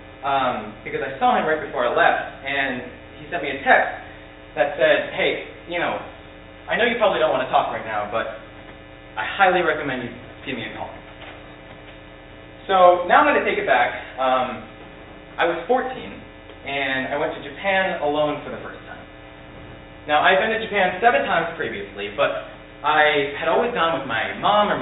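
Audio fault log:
Nothing to log here, as there's no fault anywhere in this audio.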